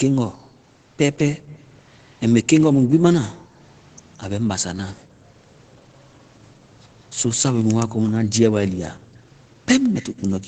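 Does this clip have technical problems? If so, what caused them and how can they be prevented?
Yes. The room background gets gated by the echo canceller at 0.32–0.58, 1.4–1.54, 2.77–3.6, 4.96–5.22 and 8.98–9.16 s: it ducks the mic by about 37–40 dB while the far end plays. A gentler suppression setting or comfort noise would stop these holes.

There's also an echo leak, a faint delayed copy trailing 173 ms behind, roughly 25 dB down, at 1.33–1.77 and 9.83–10.33 s. It's likely loudspeaker sound the canceller didn't fully remove. A headset or better speaker-mic separation should prevent it.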